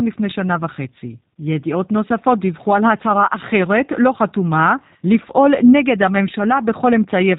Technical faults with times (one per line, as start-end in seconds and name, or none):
0.00-7.38 G.729 codec